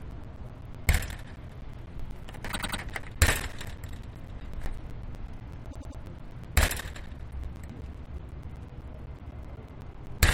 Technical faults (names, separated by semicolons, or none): periodic USB or driver dropouts; repeated frames